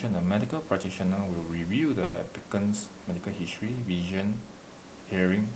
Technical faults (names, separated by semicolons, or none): call audio freeze